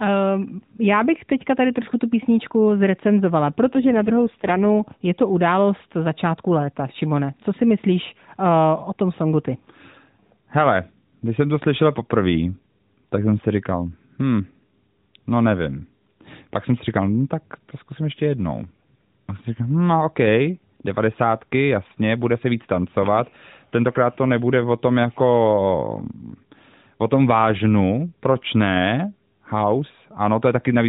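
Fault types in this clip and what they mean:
AMR rate drop: at 3.70 to 4.91 s the speech turns rough and synthetic without any gap, which fits the codec stepping down from 12.2 to 5.9 kbps on a weak link.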